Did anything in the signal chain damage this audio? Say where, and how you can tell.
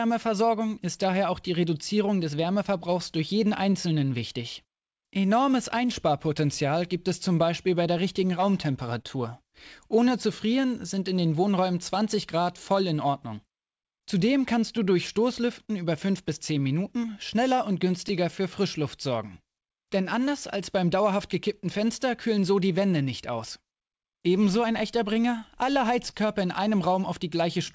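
Yes. The damage happened in the network and jitter-buffer stage of a call path. The audio itself stops at 8 kHz, which fits a wideband G.722 link.

Clock drift between sender and receiver is the underlying problem. The sender's clock runs about 2% slow, so the receiver's jitter buffer keeps draining rather than holding steady. You can tell it from random network trouble because the timing hiccups never stop and never change direction. They always add time rather than removing it. This one-sided, clip-long pattern points to a clock mismatch, not congestion.

Repeated timing corrections run from 0.26 s to 27.30 s. The receiver keeps stretching short pieces so it doesn't run dry, which plays the speech at about 98% speed and adds roughly half a second over the clip. The edits are unevenly spaced and each one is tiny, so they come across as a slightly dragging, unsteady tempo rather than distinct glitches. 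That steady bias is what separates them from loss concealment.

Scattered short gaps fall in two stretches. From 1.84 s to 4.97 s there are around four, each about 10 ms at most. From 11.95 s to 19.95 s there are around seven, the longest about 30 ms. Each gap was filled by continuing the previous sound, so they are heard as brief ticks or smears. They are isolated and cluster in time, unlike the continuous drift corrections.

Short stalls from a late packet occur at 9.02–9.06 s and 26.10–26.14 s. Each time the buffer emptied and the last sound was held for about 22–23 ms before playback resumed where it left off. Nothing is lost, but a sound lingers too long with a slight buzz or dip. A stall is a single held moment followed by a permanent delay shift, which distinguishes it from the gap clusters.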